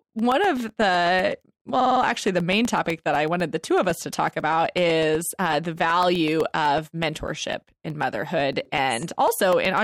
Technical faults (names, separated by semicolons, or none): periodic USB or driver dropouts; repeated frames